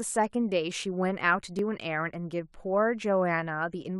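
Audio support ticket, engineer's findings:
Speech, micro-skip at 1.59 s. Probable component: stream segmenter or player join logic. Overlap between stream segments. Adjacent segment timestamps overlap, player trims the overlap, and just under 20 ms of genuine audio is discarded, so the waveform jumps discontinuously. Distinguishing: no silent gap as with a dropout, no smeared or warbly texture as with a codec glitch. Content simply lurches forward. Segment length about 4 s.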